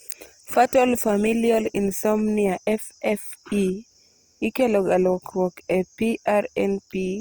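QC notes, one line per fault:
throughout: Opus compression. The speech sounds grainy, rough and noisy rather than swirly, with content reaching 20.3 kHz. This is likely Opus's CELT music mode filling starved bands with folded or noise energy, which fits a bitrate near 24 kbps.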